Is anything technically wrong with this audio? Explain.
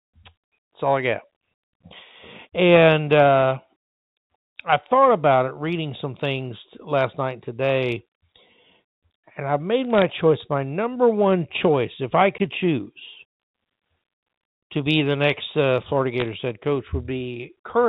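Yes. From 9.85 to 10.02 s, just before "choice my number one", and again from 16.20 to 16.28 s, there are bit errors on a digital phone line. Sparse flipped bits corrupt single G.711 samples, producing sharp ticks and crackle over the speech, which show as isolated needle spikes in the waveform and thin vertical streaks on a spectrogram.

At 12.38 s, just after "one choice if I", a block of digital silence lasting about 17 ms cuts the signal out without any fade. This likely comes from a buffer that wasn't filled in time. It sounds like a brief hole, visible as a flat line in the waveform and an empty vertical gap in the spectrogram, bounded by broadband edges under the 4 kHz telephone ceiling.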